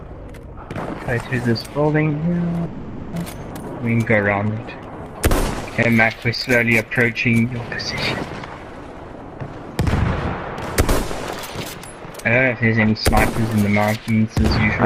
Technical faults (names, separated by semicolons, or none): call audio freeze; skip ahead; jitter buffer slow-down